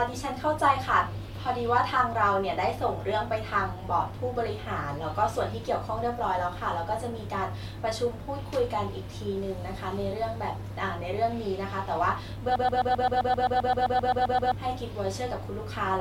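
At 12.56 s the speech locks into a broken-record loop until 14.54 s. A 131 ms fragment repeats exactly, back to back, about fifteen times. It sounds like a stuttering repeat. The player or stream likely stalled, resending its last fragment. The speech due then is lost.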